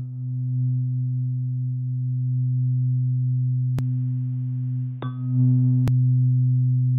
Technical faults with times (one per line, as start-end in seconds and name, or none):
3.79-5.88 input switched to a poorer device